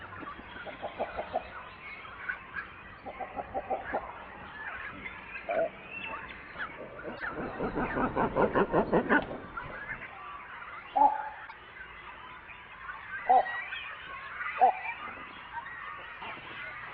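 Broken MP3 bit reservoir at 7.17 to 7.23 s and 11.46 to 11.53 s: the audio skips ahead with a brief glitch, each one spanning under three 24 ms frames, likely from cut frames leaving following frames reading another frame's bytes.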